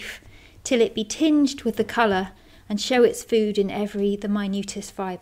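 No dropouts, clicks, distortion or timing errors can be heard anywhere in the recording.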